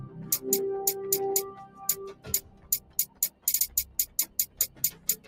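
Noise suppressor applied to music or sounds, throughout the clip: a suppressor designed for speech is left running on audio it was never meant to handle. It treats anything steady or lingering as noise and keeps changing how much it removes, with the gain reduction swinging by around 20 dB. Sharp onsets pass largely intact, while sustained parts and decays are pulled down. The result is a pumping, unsteady level and a thinned, hollow texture.

Sound cut by the noise suppressor, from 1.6 to 1.8 s, from 2.14 to 3.46 s, and from 3.86 s to the end: in these stretches the suppressor mistakes held or fading material for noise and presses it down by about 10 dB, about 11 dB, and about 10 dB respectively. The later two spans lose roughly a second of sound each. Tails sink early and sustained passages dip, leaving the transients standing out against a suddenly emptier background.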